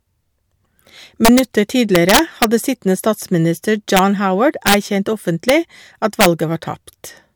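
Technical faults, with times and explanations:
1.25–1.39 s, 1.95–2.44 s, 3.97–3.99 s, 4.67–4.74 s, 5.49 s and 6.21–6.26 s: integer overflow. Violent cracks on loud speech peaks, sharper than clipping, because peaks about 1 to 6 dB over the limit wrapped to the opposite sign instead of being limited.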